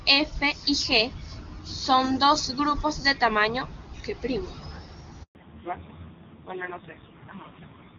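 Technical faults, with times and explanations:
5.23–5.35 s, handover gap: the speech fades out within a few tens of milliseconds and stays silent for 120 ms while the call switches networks and no speech frames arrive. The decay tail and clean silence set it apart from a hard dropout click or comfort-noise fill.
5.35 s to the end, fallback to narrowband: everything above 4 kHz disappears at once and stays gone, so the clear HD Voice sound before it turns dull and raspy. That roughness fits a low-rate AMR narrowband mode around 5.9 kbit/s. A simple low-pass filter would muffle the sound without adding that coarse texture.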